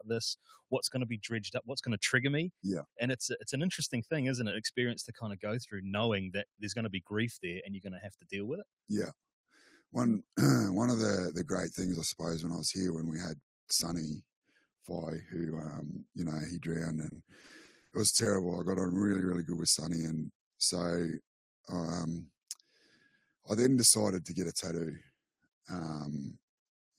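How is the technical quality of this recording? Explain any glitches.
Four glitches stand out: three brief dips in level and one choppy, robotic stretch.

From 0.38 to 0.72 s, 8.05 to 8.33 s and 14.47 to 14.84 s, the sound sinks suddenly, by about 20, 17 and 13 dB. The noise suppressor mistook it for noise and cut it down.

From 17.09 to 18.27 s, the audio turns choppy and robotic. Around ten holes, the longest 60 ms, were patched by stretching the previous sound. This is repeated packet loss.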